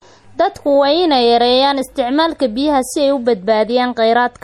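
Throughout the speech there is plainly audible codec damage, likely MP3 compression at a setting that fits roughly 48 kbps. Weak frequency lines drop in and out between frames, giving a watery, swirly texture and smeared onsets, and nothing remains above 19.3 kHz.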